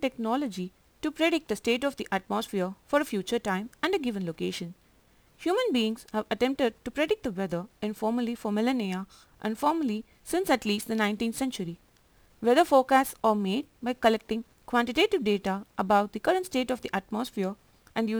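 Crude rate conversion runs through the whole recording: samples were repeated without filtering, in a pattern that fits a jump from 44.1 kHz to 48 kHz. The resulting error sits roughly 25 dB below the speech, heard as gritty, inharmonic fizz that tracks louder and brighter sounds.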